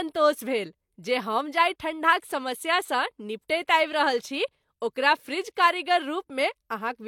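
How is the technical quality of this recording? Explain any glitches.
The quality is compromised throughout by layered compression artefacts. Across the whole clip, the speech carries mixed codec smearing under a hard spectrogram ceiling at 18.5 kHz. This is likely transcoding between lossy codecs: an MP3-like encode re-squeezed by low-rate HE-AAC.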